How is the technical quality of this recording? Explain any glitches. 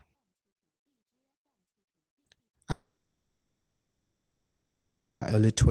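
The recording has one serious glitch. From 2.71 to 5.23 s, a long network dropout likely occurs. About 2.5 s of speech is lost. The last sound briefly continues as a fading buzz or hiss, then silence follows before audio resumes.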